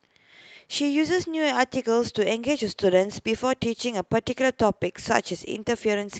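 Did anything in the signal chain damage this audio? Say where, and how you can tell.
No, nothing in the chain has damaged this speech, which has passed through a WebRTC call path whose codec limits the audio to an upper edge near 8 kHz, consistent with Opus at a moderate bitrate.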